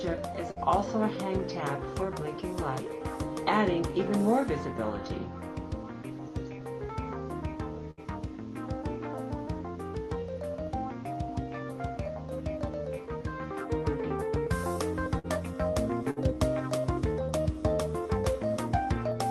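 The audio has four bursts of packet loss, at 0.51, 7.91, 15.19 and 16.11 s. Each time, about 50 to 65 ms of held, fading sound covers the gap, and then the audio jumps ahead with 40 ms gone. The fading fill is what sets it apart from a plain silent dropout or a click.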